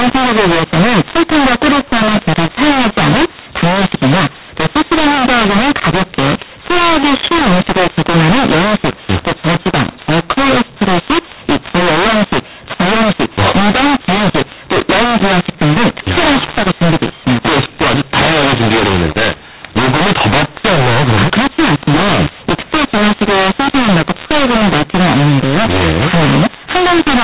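Speech over a telephone line. The whole thing has the mu-law and A-law mix-up: it was written as A-law but read as mu-law, so levels scramble, it turns harsh, and pauses fill with hiss.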